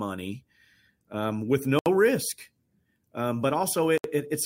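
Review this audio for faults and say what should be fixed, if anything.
A gap at a join of encoded pieces appears at 1.79 to 1.86 s, right after "um with", and again at 3.98 to 4.04 s, about 70 ms and 65 ms long. Separately encoded segments were joined with their encoder start delay and final-frame padding left in, so the speech breaks briefly, then continues where it stopped. To prevent this, trim each piece's encoder delay and padding before joining, or encode the whole recording in one pass.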